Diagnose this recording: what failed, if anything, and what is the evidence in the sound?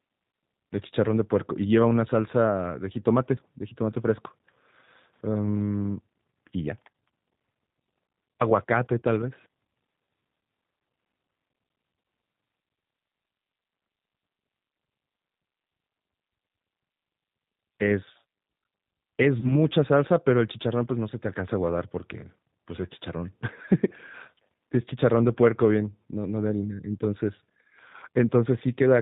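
Throughout, the speech sounds slightly rough and synthetic, with nothing audible above 4 kHz. This is the G.729 codec at the codec stage, and the damage is plainly audible. The decoder reconstructs each 10 ms frame from a vocal tract filter, a pitch predictor and a few pulses rather than the original waveform. The narrow band and roughness fit an 8 kbit/s G.729A stream.

At 0.32 to 0.34 s and again from 19.40 to 19.63 s, the speech briefly smears into a stretched, fading sound before recovering. This is VoIP packet loss concealed by the speech codec, a network-stage fault. About 20 ms and 30 ms of audio went missing, consistent with two and three lost frames. The decoder extended its last pitch and filter with falling gain, and the voice stays weak or distorted for tens of milliseconds after the packets return.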